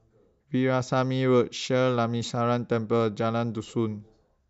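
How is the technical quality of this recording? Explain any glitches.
Nothing stood out on listening to this speech recording, so there are no glitches to explain.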